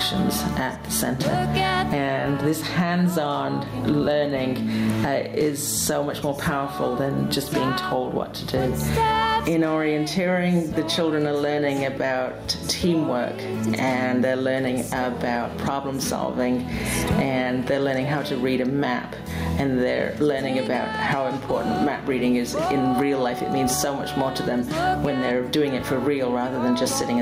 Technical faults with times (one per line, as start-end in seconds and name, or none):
0.00-27.22 gain pumping